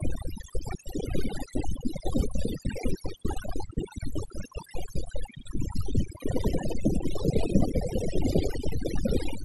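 Overdone noise removal runs throughout the speech. A noise reducer set far too aggressively keeps switching individual frequency bands down or off wherever they sit close to its noise estimate, taking softer parts of the voice with them. Pauses collapse into near silence flecked with twinkling artefacts.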